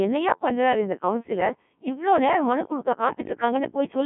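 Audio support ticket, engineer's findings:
Robotic, buzzy speech across the whole clip, band squeezed to roughly 150 Hz to 3.4 kHz, nothing above 3.6 kHz. Codec 2 vocoder, heavy damage, sounds like a 1.3 kbit/s mode: only pitch, voicing, energy and envelope survive, and the decoder resynthesises speech from sine waves.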